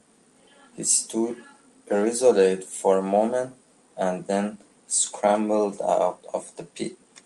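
No technical faults are audible anywhere in the speech recording.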